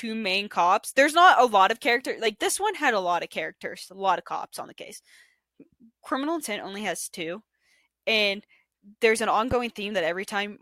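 A loud pop lands at 9.51 to 9.55 s, a single sharp pulse standing roughly 10 dB above the speech for about 30 ms. The likely cause is a sudden voltage step entering the chain, from a plug being disturbed, a switch, a static discharge or a driver glitch. The circuitry after that point shapes the step into a brief thump, and the speech continues underneath it.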